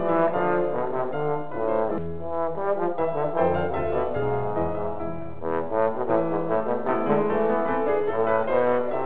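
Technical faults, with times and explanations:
1.98 to 2.09 s, skip ahead: the audio jumps forward here with no gap in between, and roughly a second of material is simply gone. That's the receiver throwing away a backlog of queued audio, most likely because the jitter buffer overflowed, and playing on from where the newer audio starts. The two sides of the cut are stitched almost directly together, with only a tiny sliver trimmed, so you hear a sudden jump in the sound rather than a silence, and the delay drops by about that second.
5.11 to 5.93 s, jitter buffer speed-up: for just under a second things run at about 127% speed while the pitch stays put, so it sounds rushed rather than chipmunked. The buffer was holding more than it wanted, so the receiver kept snipping out short pitch-period-sized chunks, one after another, shaving off something like a fifth of a second in total. All through the clip you can also hear the call codec's band limit: nothing above 4 kHz, which fits G.711 mu-law.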